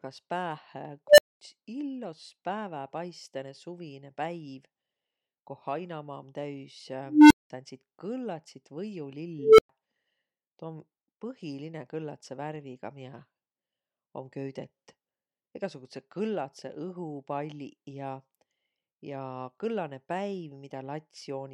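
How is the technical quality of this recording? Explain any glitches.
The speech is marred by three unstable filter bursts, at 1.07 s, 7.06 s (right after "koh hainamaa om täüs") and 9.39 s. Each time a recursive filter runs away, so a low tone of roughly 300 to 500 Hz swells over 0.1 to 0.25 s and clips. It then drops to silence for 0.1 to 0.23 s until the filter resets.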